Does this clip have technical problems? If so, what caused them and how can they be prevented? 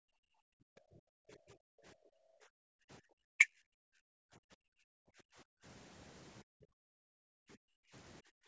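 Yes. The main one is background gated by the echo canceller: the room sound drops by about 40 dB from 0.00 to 1.83 s, 2.46 to 3.10 s, 3.75 to 5.64 s, 6.43 to 7.93 s, and from 8.22 s to the end, then comes back in between. Each time the far end's loudspeaker audio was playing, the canceller clamped the microphone hard, so the ambience pumps in and out. To prevent it, use a gentler suppressor or add comfort noise so the background doesn't vanish while the far side is active.

There are also two short dips in the speech itself, at 2.11 to 2.18 s and 3.38 to 3.47 s. The first is a deep, brief cut lasting a fraction of a tenth of a second, and the second is a shallower duck. This is likely speech suppressed in double talk. Both sides were talking at once, and the canceller couldn't tell the local talker from the loudspeaker echo, so it pulled the voice down along with the echo. A double-talk detector that holds back suppression when the near end is active would keep the voice intact. 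The call's microphone processing is also audible in that nothing reaches above 8 kHz, which fits a 16 kHz sample rate.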